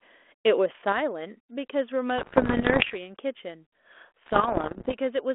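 At 0.92 s the speech level drops abruptly by about 6 dB and stays down to the end, likely one channel dropping out before the mono sum. From 2.18 to 2.96 s and again from 4.26 to 4.94 s, pops and rough bursts with brief level jumps break through the narrow telephone-band sound of the 32 kbit/s G.726 ADPCM link. These are bit errors on the ADPCM link, with roughly 2 percent and then about 1.5 percent of bits flipped. Each error knocks the decoder's step size and prediction off track, so the damage rings on for several milliseconds.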